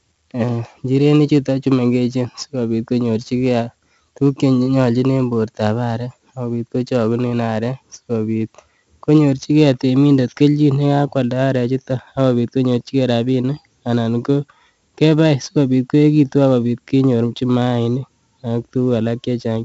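Throughout the speech, heavy 4-bit ADPCM compression adds a gritty hiss that follows the speech level and vanishes in pauses, unlike steady background noise, with roughness on sharp onsets. Nothing sounds above 7.8 kHz, which fits 16 kHz sampling at 64 kbps.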